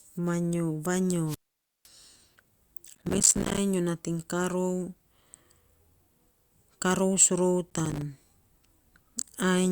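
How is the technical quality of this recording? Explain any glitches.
The recording has three glitches: one wireless microphone squelch dropout and two bursts of processor overload crackle.

From 1.26 s to 1.88 s there is a wireless microphone squelch dropout. The radio link from the FM microphone weakens, hiss rises briefly, and then the receiver's squelch gate closes and mutes the output for about 0.51 s. The speech falls into a hole of near silence and comes back once the signal recovers enough to reopen the squelch.

Processor overload crackle appears from 2.88 s to 3.58 s and again from 7.70 s to 8.02 s. The audio processor could not finish its short buffers in time. The gaps fit buffers of around 5 ms, with dozens missed in the first burst and fewer in the second. Each missed buffer drops a tiny slice of silence with hard edges into the speech. Together these gaps make a gritty, tearing crackle over the speech that stops when the load eases.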